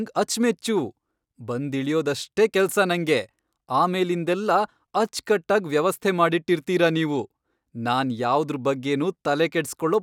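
Nothing stood out on listening to this speech recording.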